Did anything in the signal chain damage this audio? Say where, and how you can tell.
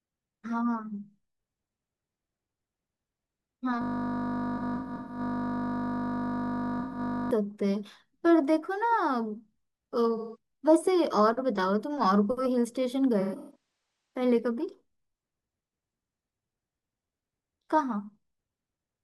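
Yes. At the driver or buffer stage the system hung from 3.82 to 7.31 s while the hardware kept replaying one 20 ms ring buffer, a system hang loop. That single slice repeats about 175 times, so the speech collapses into a steady 50 Hz buzz.

The codec stage also shows AAC frame loss with concealment at 4.57 to 5.20 s, 6.80 to 6.99 s, 10.16 to 10.37 s and 13.19 to 14.20 s. The decoder patched the missing frames from the last good spectrum, leaving smeared, noisy, phasey stretches, with the longest continuous gaps in the first and last of these roughly 150 ms.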